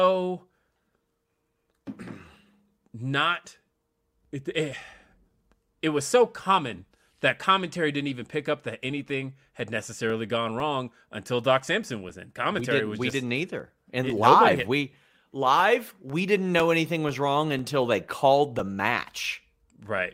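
From 8.60 s to 19.60 s, after "commentary didn't even pick", periodic USB or driver dropouts blank roughly 2 ms every 0.5 s, heard as regular ticks.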